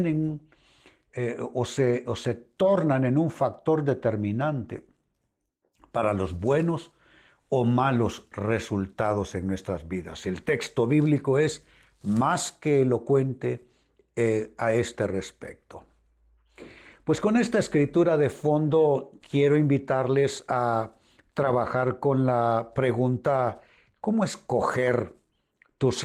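No technical faults can be heard in this speech clip. The Opus voice compression leaves only light coding traces and keeps the full band, which fits hybrid mode at a rate of about 20 kbps.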